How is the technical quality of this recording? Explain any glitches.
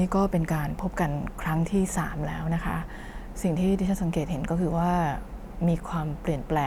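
No glitches turn up anywhere in this speech recording, so there is nothing to explain.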